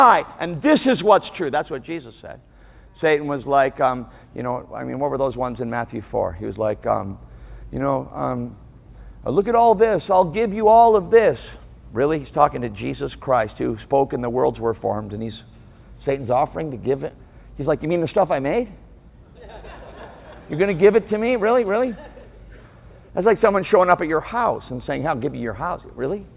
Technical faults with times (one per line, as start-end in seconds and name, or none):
none